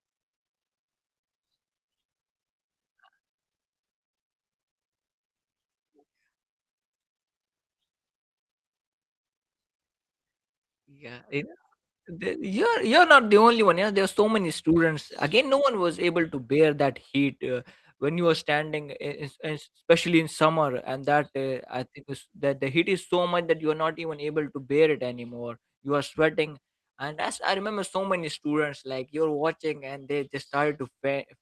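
Speech over a WebRTC call path with Opus coding, the top end reaching about 12 kHz as that path allows; no technical fault to report.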